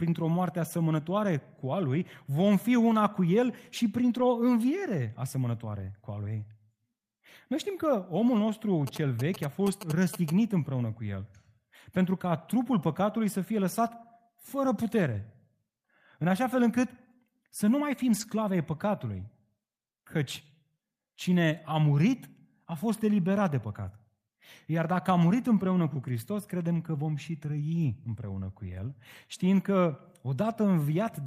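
Lost packets rebuilt from error correction occur at 4.15 to 4.25 s, 9.59 to 9.69 s, 18.11 to 18.25 s, at 26.75 s just before "că vom și", and at 27.75 to 27.85 s between "că vom și" and "împreună cu". Each time, the packet that followed carried a low-bitrate copy of the lost audio, and the decoder played that copy instead of leaving a gap. The speech doesn't drop out, but for 60, 60, 80, 20 and 60 ms it turns rougher and noisier. Those lengths fit three, three, four, one and three lost packets.

GSM signalling bursts run from 8.87 to 10.30 s, beginning after "știm că omul nostru" and ending before "împreună cu". A nearby 2G phone was exchanging short groups of radio bursts with the network, and the audio circuit rectified that energy into sound. The result is a galloping dit-dit-dit of short buzzes at 217 Hz, roughly 10 dB below the speech. The rebuilt frames at 9.59 s fall inside this interference.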